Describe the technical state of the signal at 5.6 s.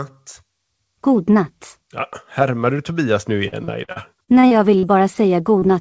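A brief smear in the speech runs from about 5.59 to 5.65 s, where the sound wobbles and any short consonant there can drop out. This is short concealed packet loss. Roughly 40 ms of audio arrived too late for the decoder, and the receiver covered about 32 ms of it by extending the preceding sound, using its pitch for voiced parts or shaped noise otherwise, before blending back into the real signal.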